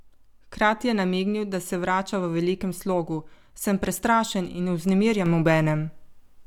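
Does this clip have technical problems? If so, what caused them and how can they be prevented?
Yes. A sudden gain jump at 5.26 s, likely an unramped digital gain step, raises the speech and background noise together by about 6 dB through the end. Ramping every gain change over a few milliseconds prevents it.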